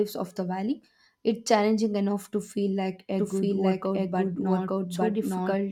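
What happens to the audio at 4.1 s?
At 4.1 s the speech is overlaid by a second, full-band copy of itself running about a second behind and at roughly the same loudness. There is no decay or room colour on it, and it cuts in abruptly at 3.19 s and continues to the end. This doubled audio track likely comes from the same signal being captured twice, once through a slower path that lags the original.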